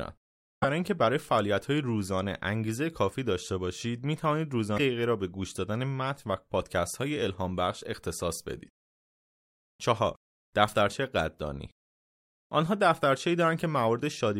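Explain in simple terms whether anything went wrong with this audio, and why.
Twice the speech was hit by damaged data in a compressed stream. A small stretch of the compressed file was corrupted, so the decoder couldn't read those frames properly, lost its place, and had to hunt for the next clean starting point. You hear a brief chirp, squawk, click or short gap where the speech should be, lasting about 0.06 seconds each time, first at 0.59 seconds and again at 4.74 seconds.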